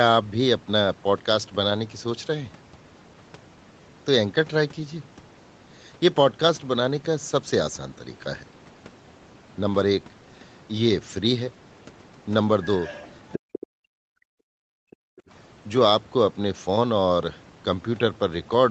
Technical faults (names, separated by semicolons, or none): other side's voice leaking through; speech suppressed in double talk